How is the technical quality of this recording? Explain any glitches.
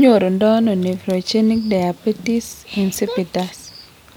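No technical faults can be heard anywhere in the recording, so there are no glitches to explain.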